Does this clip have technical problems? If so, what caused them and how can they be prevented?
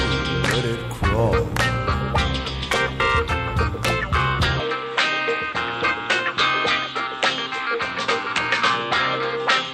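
Yes. From 4.60 s to the end, the audio loses everything above 8.4 kHz with no gap and no level change, and a faint new noise floor appears. This is likely an input switched to a poorer device. Locking the recording input to one microphone and disabling automatic device switching prevents it.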